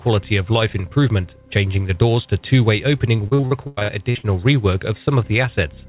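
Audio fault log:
3.16–4.25 s, repeated packet loss (robotic sound): ten gaps land in about a second, the longest around 100 ms, and roughly 39% of that stretch is concealment rather than real audio. Each hole gets patched by stretching out the last bit of sound, then the next hole hits before things recover, so it comes out choppy with pieces missing. Everything sits below 4 kHz, which fits a narrowband G.711-style call path.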